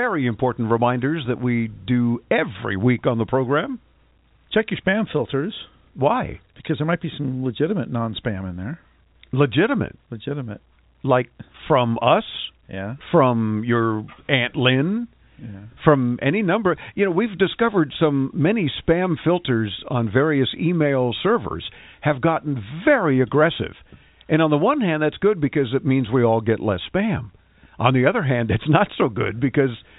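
No technical faults can be heard in this speech recording.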